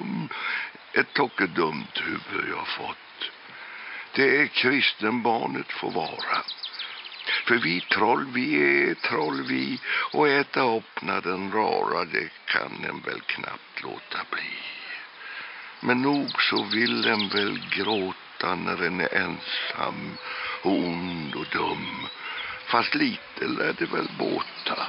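No technical faults can be heard anywhere here.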